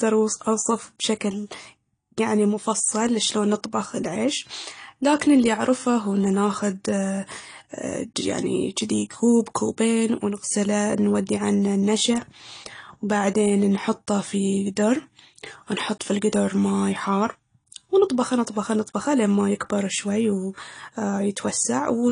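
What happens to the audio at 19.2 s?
At 19.2 s the speech sounds dull and smeared, with audible warbling and fizz and nothing above about 10.1 kHz, as it does throughout the clip. This is likely AAC compression, consistent with AAC-LC at around 32 kbps, coarsely quantising spectral lines and cutting the top band.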